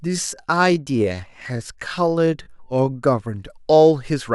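A time-stretched section runs from the start to 3.04 s, where the speech plays at about 0.7 times its normal pace while the pitch holds steady. The likely cause is software lengthening the passage to fill a set duration by repeating short slices of the waveform instead of resampling it. The slowed speech drags, and the pace snaps back to normal abruptly after 3.04 s.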